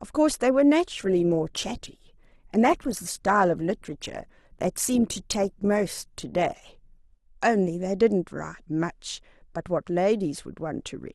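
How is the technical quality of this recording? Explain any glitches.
The quality drops for about six seconds. From 0.98 s to 6.98 s the speech abruptly takes on more smeared codec artefacts, then snaps back with no gap either side. That is an adaptive stream at a lower bitrate: the player switched to a leaner encoding when the connection slowed. The sound fits Opus falling from around 64 kbit/s to 16 kbit/s.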